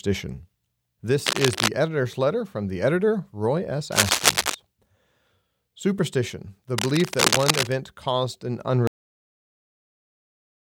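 A speech recording carries three bursts of cable scratch noise: dense, uneven crackling and rustling laid over the voice from 1.26 to 1.68 s, from 3.92 to 4.55 s and from 6.78 to 7.72 s. The first and third bursts sit at roughly the same level as the speech, and the middle one is somewhat louder. The likely cause is a worn cable, connector or control being moved, so that its contact resistance jumps around rapidly and injects broadband noise. The clip also has a cut-off end. At 8.87 s the audio stops in the middle of the sound and drops straight to digital silence with no decay, and that silence runs to the end of the file. This points to the final buffers never being written or played out, so the signal is truncated rather than faded or completed.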